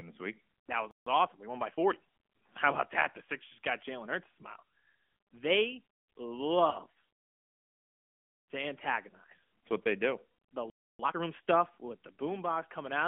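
The whole recording carries the AMR narrowband mobile codec at a rate that fits 10.2 kbps. The speech is confined to a telephone band of roughly 200 Hz to 3.4 kHz, and the codec's vocal-tract model, rebuilt from a few pulses per subframe, leaves the voice plainly buzzy and synthetic. Unlike a simple low-pass filter, this adds a textured, artificial grain as well as dulling the sound.

At 0.91 s a playback stall cuts the speech off in mid-flow for about 153 ms. This is a hard silence, not a fade, most likely because the player ran short of data or its thread was held up.

From 1.07 to 2.08 s the player catches up through time-compressed catch-up at about 1.15 times normal speed. Small slices are cut out and cross-faded, so the delivery sounds slightly hurried while the pitch stays put. A plain speed-up would raise the pitch.

At 2.35 s and again at 6.70 s comes a single lost AMR speech frame, 20 ms each. 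The decoder reuses the last good pitch and vocal-tract settings at reduced gain, which causes a brief dip or warble. The first disturbance lingers to about 2.56 s as the voice returns weak or rough. Unlike a stall, there is no clean gap, just a smeared, weakened moment.

A longer playback stall runs from 10.70 to 10.99 s, about 293 ms of dead silence. It is followed straight away by a much faster time-compressed catch-up from 10.99 to 11.27 s at about double speed, heard as a rushed burst leading into "stuff with".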